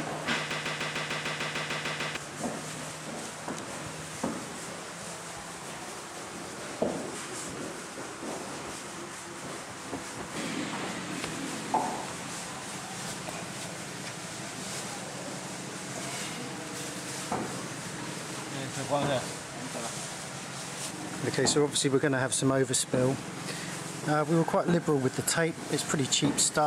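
Right near the start, from 0.51 to 2.17 s, there's a broken-record loop: a short fragment of about 150 ms plays eleven times back to back, identical each pass, so you get a stuttering, machine-gun repeat for well over a second. That's most likely the player or stream stalling and re-sending the last chunk it still held, and whatever audio belonged in that stretch is simply gone.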